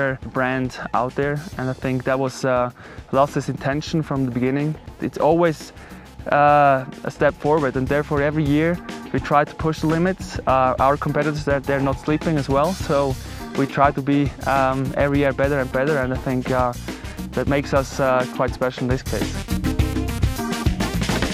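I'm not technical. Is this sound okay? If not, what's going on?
Yes, this one sounds fine, and there's nothing going wrong here that needs fixing.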